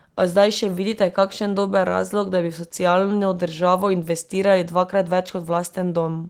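Nothing technically wrong can be heard in this speech recording. The Opus voice compression is audible only as a light coding texture with the full band kept, which fits hybrid-mode Opus at around 20 kbps.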